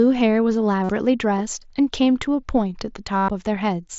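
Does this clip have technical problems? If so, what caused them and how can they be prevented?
Yes. Concealed Bluetooth headset packet loss at 0.84–0.89 s and 3.18–3.29 s. Lost headset packets were patched by repeating recent waveform, giving brief buzzy tones. Keeping the headset close to the phone with a clear path prevents this.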